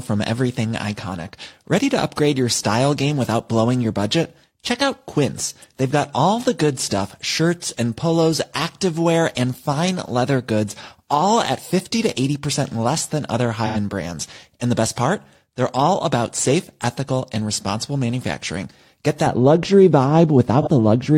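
AAC frame loss with concealment at 13.66 to 13.77 s: about 85 ms of the speech is missing, a gap that fits two lost AAC frames. The decoder bridges it by reusing the last good spectrum with altered phase, so the patch comes out smeared and noisy rather than silent.

De-emphasis applied wrongly from 19.27 s to the end: a treble cut meant to undo pre-emphasis lands on audio that never had any, or is applied twice. The response slopes smoothly downward, reaching about 11 dB below the 1 kHz level at 10 kHz, which leaves the speech dull and muffled.

Within that muffled stretch, a second AAC frame loss with concealment occurs at 20.62 to 20.67 s. This shorter, roughly 43 ms gap fits a single lost frame and is filled the same way, as a brief phasey smear.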